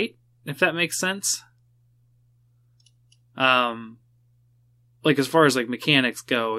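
No technical faults can be heard anywhere in this speech recording. There are no events to place in time and no faults to explain.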